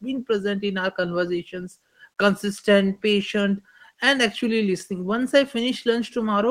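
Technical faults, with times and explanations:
No technical faults can be heard in this speech recording, and the signal holds steady with no dropouts, distortion or interruptions.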